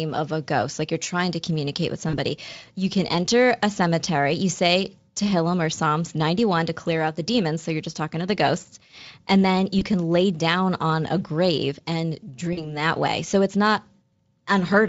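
VoIP packet loss concealed by the speech codec occurs at 2.09–2.18 s after "trying to communicate with", at 9.79–9.83 s before "can lay down on", and at 12.53–12.76 s after "on a grave and". Packets drop out and the speech decoder extrapolates, producing a brief buzzy or noisy, fading smear.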